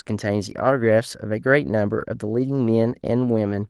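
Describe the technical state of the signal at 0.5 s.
At 0.5 s, from 0.49 to 0.71 s, there is a lost packet rebuilt from error correction. Opus played the following packets' low-bitrate copies, so there is no gap, but the spectrogram shows rougher, noisier texture.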